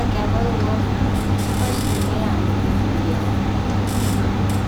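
No technical faults can be heard anywhere in the speech. There is nothing here to place on a timeline.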